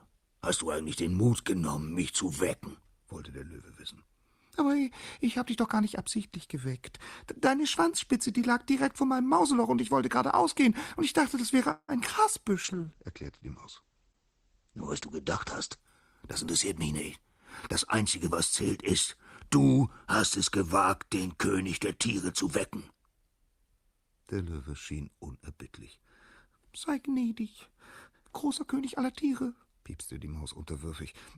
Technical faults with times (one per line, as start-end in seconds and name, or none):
11.71-11.91 call audio freeze
12.66-17.63 call bitrate drop
15.75-16.43 jitter buffer speed-up
18.65-19.58 jitter buffer speed-up